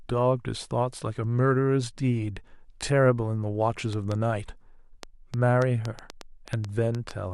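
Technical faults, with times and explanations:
3.93 to 7.12 s, train of clicks: About fifteen sharp clicks tick over the speech at roughly 4.1 per second, unevenly spaced. They stand out by something like 10 dB and persist through pauses. Likely interference or a faulty connection or power supply injecting repeated pulses.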